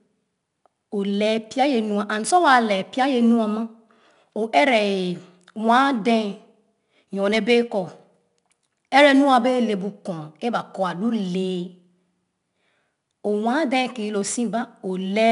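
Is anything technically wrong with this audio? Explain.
Yes. The speech carries 4-bit ADPCM compression throughout. Coarse 4-bit prediction steps leave gritty, level-following hiss on loud passages, with nothing above 10.6 kHz. Unlike perceptual-codec swirl, the noise is broadband.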